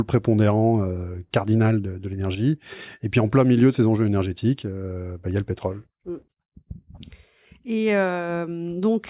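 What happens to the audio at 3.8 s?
Nothing goes wrong at 3.8 s; the speech passes through that moment intact, with no dropout, click or distortion.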